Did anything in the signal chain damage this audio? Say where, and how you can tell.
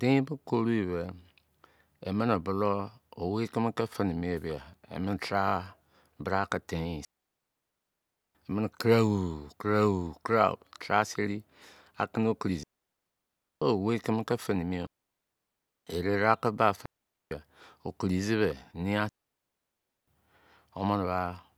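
Yes, the wireless link dropped out. This is digital wireless dropout, with clean near-silent holes at 7.05–8.35 s, 12.63–13.62 s, 14.87–15.87 s, 16.86–17.31 s and 19.09–20.07 s. There's no noise burst at either edge, so the receiver lost too much data and muted quickly.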